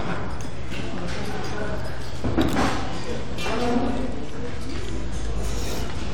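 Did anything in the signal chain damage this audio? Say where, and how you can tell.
Yes, there is a DC offset running through the whole clip, most plausibly introduced at the analogue-to-converter stage, where a biased input or an uncorrected converter leaves a constant voltage riding under the signal. You can't hear it, but the waveform sits visibly above or below the centre line for the entire duration, shifted by about -23 dBFS. A spectrogram shows a steady band of energy pinned at 0 Hz. The offset eats headroom on one side, so peaks clip sooner.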